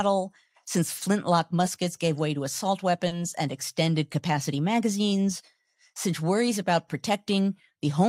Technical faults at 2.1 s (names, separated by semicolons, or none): none